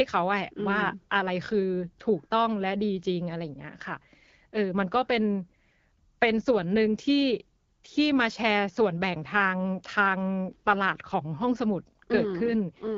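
No technical faults occur anywhere in this speech recording.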